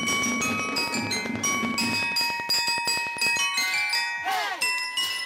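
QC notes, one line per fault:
0.03–3.38 s: train of clicks, about forty regular pulses at 10.5 per second, roughly 15 dB above the sound; likely interference or a faulty connection or power supply.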